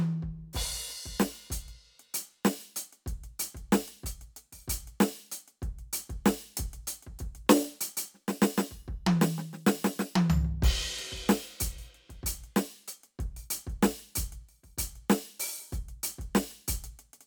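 No technical faults are audible.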